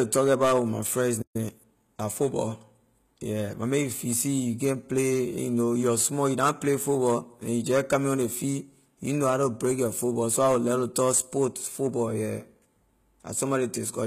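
Throughout the speech, the treble sounds gritty and lispy on s sounds, with plainly audible codec damage. This is likely HE-AAC compression at a low bitrate, around 20 kbps. The upper bands are rebuilt by copying lower ones, so harmonics misalign. A spectrogram shows blocky, repeated texture and nothing above 14.9 kHz.

Just after "about with my friends", the audio drops to silence from 1.22 to 1.36 s and then resumes. This is likely a playback stall, with the output silent for roughly 126 ms. The waveform shows a flat gap, and the spectrogram shows a clean vertical blank band.

From 1.36 to 1.60 s comes a time-compressed catch-up. The player clears its backlog by cutting and cross-fading small slices, so the speech runs at 1.5x speed at normal pitch. The spectrogram shows compressed, faintly seamed harmonic contours.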